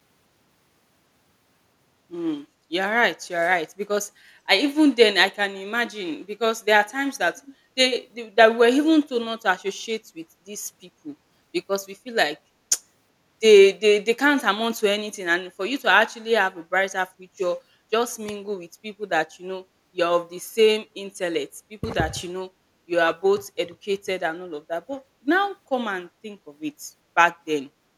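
From 7.36 to 7.55 s there is an echo leak. A faint, delayed copy of the speech comes back about 377 ms after the original. It sits roughly 25 dB below the speech, so it is quiet, a brief ghostly scrap. It lasts about 0.2 s. The likely cause is a loudspeaker on one side of the call whose echo canceller failed to remove everything its microphone picked up, sending that residue back down the line.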